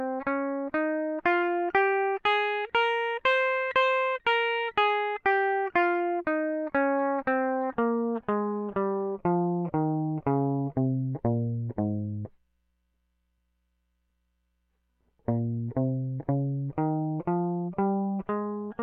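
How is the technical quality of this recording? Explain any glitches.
No technical glitches are audible anywhere in this music.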